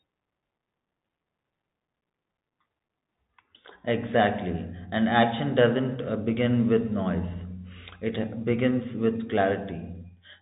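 From start to finish the speech carries the Bluetooth CVSD headset codec. Its one-bit delta coding, which fits a 64 kbps link, leaves nothing above about 3.8 kHz, so a spectrogram shows a hard ceiling. Sibilants sound scratchy over a grainy hiss, and the waveform looks fuzzy and stepped.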